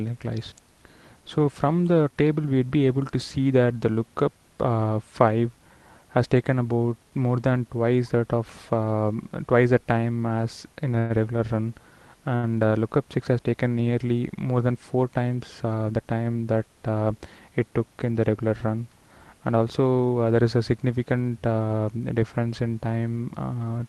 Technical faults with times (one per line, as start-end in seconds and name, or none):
10.98-11.12 call audio freeze
12.36-12.45 short stall from a late packet
15.37-15.93 jitter buffer speed-up
21.99-22.47 jitter buffer speed-up